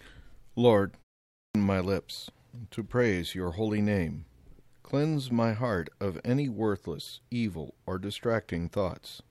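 At 1.3 s the speech jumps in abruptly out of a short pause of about 0.35 s, with the opening sounds missing until 1.55 s, so "my lips to praise" begins already in progress. This is a clipped start after a pause: the output device went idle during the brief silence and took roughly a quarter of a second to wake and lock again, swallowing that stretch. The quiet gaps themselves stay silent without costing any speech.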